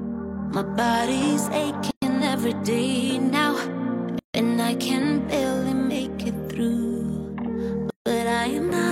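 Gaps at joins of encoded pieces break continuous audio at 1.91 s (115 ms), 4.19 s (153 ms) and 7.90 s (158 ms), where separately encoded segments were joined untrimmed. Each shows as a soft-edged blank vertical stripe on a spectrogram and a flattened waveform stretch before the sound resumes.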